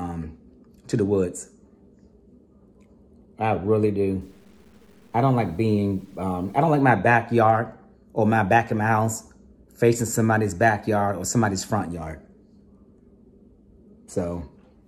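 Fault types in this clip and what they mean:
low bit depth without dither: from 4.2 to 6.8 s, quieter parts turn gritty, with grainy distortion following the sound roughly 40 dB down, likely from undithered truncation to about 9 bits.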